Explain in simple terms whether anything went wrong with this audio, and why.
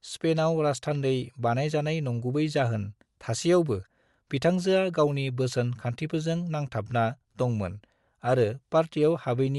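Something did go wrong, and it lasts through the whole clip. The speech has a breathy, grainy edge, and the crisp top end of the sound is replaced by a hiss-like fill. This is most likely Bluetooth LC3 compression, the codec wireless earbuds and headsets use. To save data it cuts the sound into very short slices and discards much of the high-frequency detail, then fills the gap with noise.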